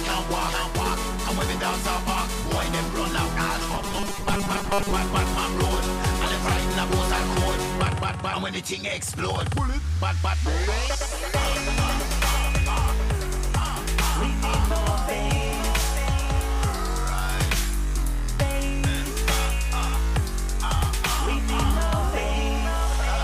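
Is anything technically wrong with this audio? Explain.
Yes. From 3.74 to 4.91 s there is robotic sound from repeated short buffers. The likely cause is audio arriving too seldom, so playback keeps looping a 5 ms chunk for most of that stretch while fresh audio is dropped. That loop imposes a fixed 200 Hz buzz, making the sound rigid and metallic. A waveform shows identical 5 ms cycles repeating, and a spectrogram shows flat, evenly spaced harmonic lines at multiples of 200 Hz.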